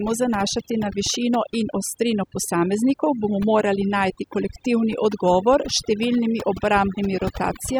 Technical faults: overdone noise removal

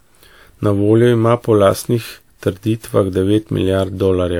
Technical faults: generation loss

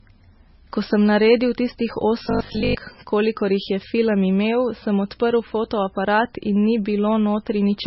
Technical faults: MP3 compression; robotic sound from repeated short buffers

